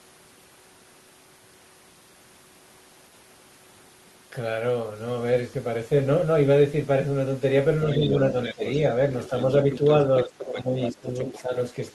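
From 7.92 to 8.72 s a second, fainter voice sits under the talker at about 10 dB below, the other side's voice leaking through. The likely cause is a loudspeaker playing the far end into the microphone and an echo canceller that left a residue. This is a separate talker's voice added to the sound, not the main voice changing. Inside that stretch, at 8.54 to 8.63 s, the talker's own level drops by around 15 dB for about a tenth of a second. That is speech suppressed in double talk, likely the canceller turning everything down while both sides spoke. It is a dip in the main voice, not an added one. The leak returns from 9.23 to 11.41 s at a similar level. From 10.25 to 11.55 s the talker's voice is again pulled down in pieces, by up to about 15 dB, for roughly 0.7 s in total, while the other side's voice is still present.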